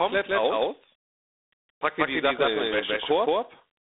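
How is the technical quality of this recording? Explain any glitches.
The recording has two faults, both lasting the whole clip.

Doubled audio track, throughout: a second full-band copy of the speech runs roughly 0.15 s behind at about the same loudness. It is most likely a second capture path or an out-of-step edit. It has no room decay, so it sounds like a crisp, stuttering echo on every syllable.

G.726 ADPCM, throughout: each sample is coded as a few bits of difference from an adaptive prediction. Here the coarse steps leave a harsh, rasping hiss that rises and falls with the speech level, which fits the 24 kbit/s mode. The line band runs from 250 Hz to 3.7 kHz, and nothing above 3.8 kHz survives, giving a thin telephone sound.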